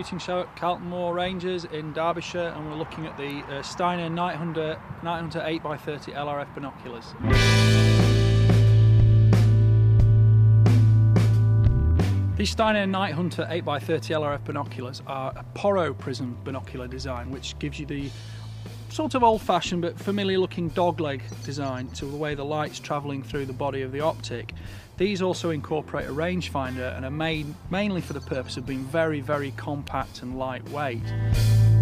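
At 3.30 s and again at 29.88 s a single sharp snap sits on top of the audio, peaking around -25 and -20 dBFS. These are likely electrical switching spikes from a nearby switch or discharge. Unlike a dropout, the sound underneath never breaks.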